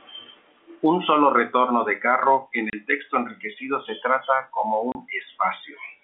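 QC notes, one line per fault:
2.70 s and 4.92 s: packet loss filled with silence. A 30 ms hole after "retorno de carro en" and after "enriquecido se trata como" leaves hard-edged gaps, which fits one lost 30 ms packet each.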